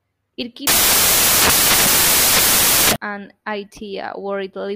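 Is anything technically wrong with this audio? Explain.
Yes. Samples built from the wrong bytes run from 0.67 s to 2.96 s. Over that stretch the decoder assembles each sample from misaligned or swapped bytes, so the rapidly fluctuating low-order bits end up in the most significant positions and dominate every value. The speech is replaced by loud, harsh broadband noise, close to white on the louder sounds, and the speech returns intact after 2.96 s.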